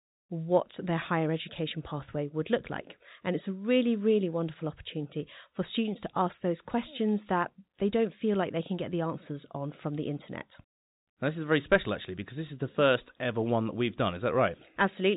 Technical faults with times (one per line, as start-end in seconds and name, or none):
none